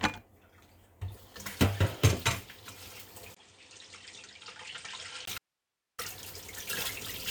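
A recording of everyday sounds, hit by two faults. From 3.35 s to 5.27 s the input likely switched to a poorer device: after a 20 ms silence the sound drops about 10 dB, loses everything above 8.9 kHz and turns dull, with a new noise floor roughly 45 dB down. Then, from 5.38 s to 5.98 s, an audio dropout to a faint residue, likely a lost signal feed with the path still open, cuts the sound abruptly for 0.6 s, leaving only hiss about 55 dB below the signal.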